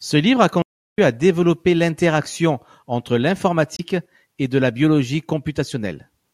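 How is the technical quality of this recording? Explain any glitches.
Two glitches stand out in this speech recording, one early and one just past the midpoint.

At 0.62 s, right after "livre a", the audio cuts to silence for about 0.36 s and comes back at 0.98 s with "à développer l'interaction entre". That's a playback stall, most likely the player running dry on buffered data or having its thread held up, so nothing reached the output until it caught up. You hear a clean hole in mid-flow rather than any noise.

At 3.75 s, just after "à développer l'interaction entre", there's damaged data in the compressed stream, lasting to 3.80 s, right before "et de la biologie". Some bytes in that stretch were corrupt, so the decoder misread the frames, lost its place and had to hunt for the next valid frame header. It comes out as a short disturbance of about 50 ms.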